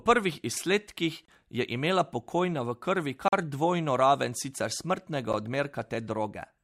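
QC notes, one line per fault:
1.25–1.28 s, 3.28–3.33 s, 5.33 s: gap between stream segments. Hard-edged silences of about 29, 44 and 10 ms fall every 2 s where segment timestamps fail to meet. Each shows as a flat waveform stretch and a blank full-height stripe on the spectrogram.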